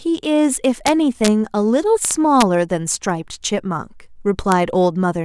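Integer overflow cracks this speech clip at 0.87 to 0.89 s, 1.25 to 1.28 s, 2.05 to 2.42 s and 4.52 s. Loud peaks pushed the signal past the largest value the integer format can hold, and instead of being limited, those samples wrapped around to the opposite extreme. Each overshoot becomes a full-range jump heard as a violent crack, far harsher than clipping. The longest burst, around 2.05 s, is driven about 1 dB over the limit.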